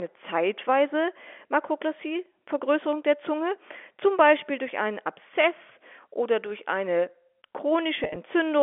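From 8.04 to 8.16 s, packet loss with pitch repetition: 80 ms of gaps, none over 30 ms, are patched by repeated pitch periods, giving brief buzzy holds seen as identical repeating waveform cycles.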